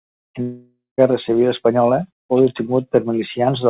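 From 0.42 to 1.00 s the speech gives way to a fading buzz, then about 0.17 s of silence, likely a long network dropout.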